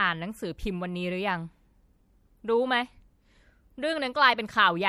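MP3 compression, throughout: the speech sounds watery and swirly, with dulled treble and smeared consonants, likely from a lossy encode at about 64 kbps.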